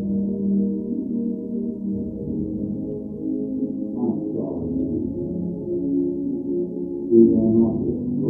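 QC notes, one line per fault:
No fault heard, so there is nothing to log in these QC notes.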